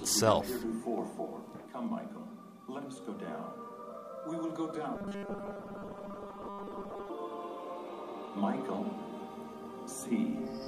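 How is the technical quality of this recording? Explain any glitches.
There's one clear glitch, a stretch of robotic sound from repeated short buffers running from about 4.96 to 7.10 s. The audio there turns into a stiff, metallic buzz pitched at 200 Hz that only loosely tracks the underlying sound. The likely cause is new audio arriving too slowly, so the playback keeps looping the last tiny chunk, which fits a buffer of around 5 ms. Most of that passage is repeats rather than real material.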